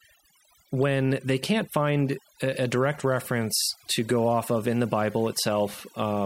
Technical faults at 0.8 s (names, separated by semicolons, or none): overdone noise removal